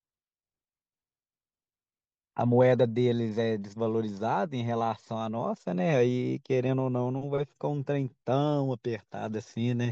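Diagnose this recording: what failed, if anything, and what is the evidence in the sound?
Nothing in the recording points to a failure at any stage of the chain, with the speech signal continuous and stable throughout and no audible defect to trace to a cause.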